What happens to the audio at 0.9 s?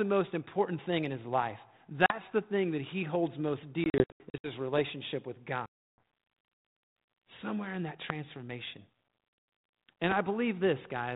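Nothing goes wrong at 0.9 s: the speech continues intact through the 32 kbit/s G.726 ADPCM telephone path, with no dropout, click or distortion at that point.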